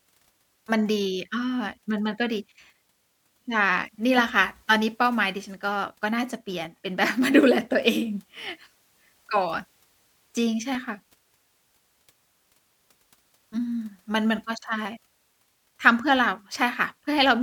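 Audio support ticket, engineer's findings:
Regular clicks in the speech, about every 2.05 s from 0.49 s to 16.9 s. Likely clock drift buffer slips: two devices on independent clocks, mismatched by around 200 ppm, buffer periodically dropping or repeating roughly 15 samples.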